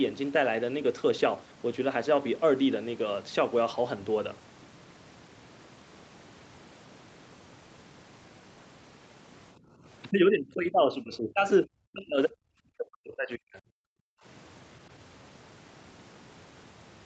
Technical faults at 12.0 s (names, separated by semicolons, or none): speech suppressed in double talk